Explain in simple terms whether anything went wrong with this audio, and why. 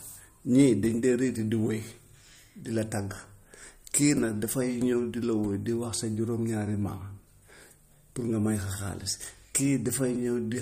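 The whole recording has a watery, swirly edge, and the highest treble above about 15 kHz is missing. This is likely MP3 compression that was squeezed too hard. Early on, from about 0.59 to 0.64 seconds, the loudest peaks crackle briefly. That is hard clipping. The speech was slightly too loud for one stage, so the tops of the waveform were cut flat.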